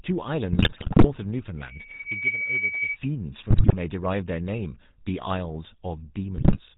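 A GSM full-rate codec sits in the path for the whole of this speech clip. It rebuilds the voice from a vocal-tract filter driven by a thinned, regularly pulsed excitation, which fits a 13 kbps full-rate coder. That leaves nothing above 4 kHz and gives the voice a constant buzzy, gravelly roughness that is plainly audible from start to finish. On top of this, the radio link delivers corrupted bits to the decoder three times, and these are heard as GSM bit errors. From 0.52 to 1.05 s, 3.50 to 3.76 s and 6.36 to 6.59 s, damaged filter, pitch and gain values distort the spectrum and the level from frame to frame. Each stretch becomes a burst of squawks, pops and gargling, and the error rate behind them points to several percent of the bits being flipped. Between 1.57 and 2.98 s, loudspeaker feedback squeal appears. The microphone picks up its own loudspeaker, and the loop gain climbs above one at 2.3 kHz, so that tone feeds on itself and grows in under a second. 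It becomes a steady squeal that sits somewhat louder than the speech until it stops at about 2.98 s.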